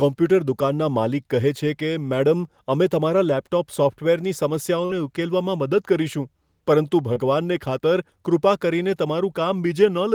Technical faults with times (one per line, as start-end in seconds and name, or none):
4.85-4.91 short concealed packet loss
7.13-7.18 short concealed packet loss